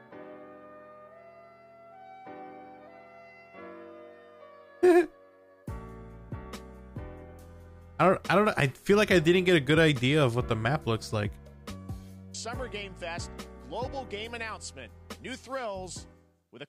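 Nothing goes wrong anywhere in this audio, so there's no technical fault to point to at any moment.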